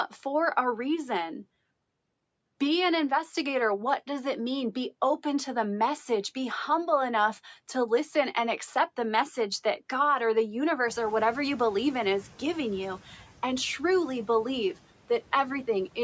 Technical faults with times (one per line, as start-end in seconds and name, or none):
10.87-12.99 noise suppressor catching up